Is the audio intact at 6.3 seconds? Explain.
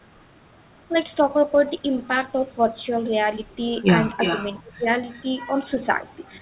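Yes, the speech at 6.3 seconds is intact, with no dropout, click or distortion at that moment, only the narrowband call-path sound, with nothing above about 4 kHz, that runs through the whole clip.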